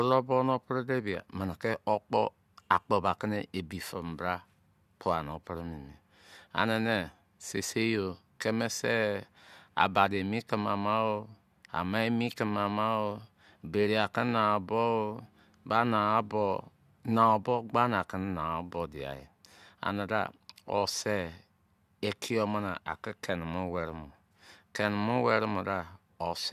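Speech, with nothing technically wrong with it.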